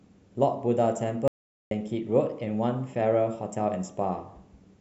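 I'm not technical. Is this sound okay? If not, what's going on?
No, there's an audio dropout to silence from 1.28 to 1.71 s: the speech cuts to dead quiet for nearly half a second, likely a brief lost connection.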